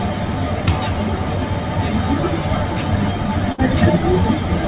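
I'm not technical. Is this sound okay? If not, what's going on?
No, it has two short problems.

From 2.49 to 2.72 s there is processor overload crackle. The computer handling the sound got too busy. It works in tiny slices, each around 10 ms long. It missed several of them in a row, around five. Those slices were simply skipped, leaving little holes with sharp edges. Together they sound like a rough, gritty crackle laid over the sound. It stops once the computer catches up.

From 3.52 to 3.60 s there is a burst of packet loss. Sound on a call travels in small pieces over the network. Here a chunk about 60 ms long never arrived in time. The receiving end covered the gap by stretching the last sound and letting it fade. So you hear a brief smeared buzz or hiss. Then the sound jumps ahead, and that small stretch is gone for good.

The sound came through a phone-style call connection, which is why nothing above 4 kHz is there.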